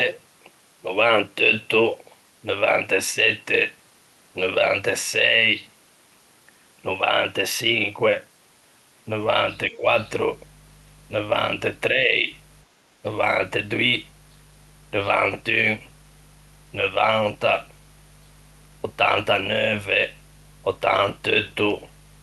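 Speech suppressed in double talk, from 9.71 to 9.85 s: the talker's level falls by roughly 10 dB for about a sixth of a second and then recovers. The likely cause is the echo canceller facing sound from both ends at once. Unable to separate the near talker from the loudspeaker's echo, it pulled the whole microphone signal down rather than risk passing echo, which takes the speech with it.

Background gated by the echo canceller, from 12.67 to 12.97 s: the room sound behind the speech sinks by about 6 dB, with roughly 0.2 s of that stretch quieter, before returning. Here the canceller clamped the microphone while the loudspeaker was active. That stops echo leaking through but also mutes the ambience, leaving a brief hole in the background that fills again once the suppression releases.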